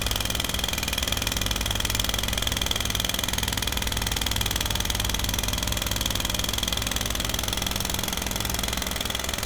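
Clock drift buffer slips occur from 1.26 s to 8.96 s: a short click recurs every 1.28 s. Two independently clocked devices likely disagree by a few hundred parts per million, so their shared buffer drifts until a small block of samples is dropped or repeated.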